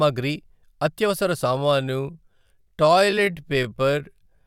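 A speech recording with a time-stretched section running from 1.47 s to the end. At that point the pace drops abruptly to about 0.62 times the original speed, yet the pitch does not fall with it. The slowed part drags. The likely cause is software lengthening the audio to fill a set duration while holding pitch, which it does by repeating short slices of the sound.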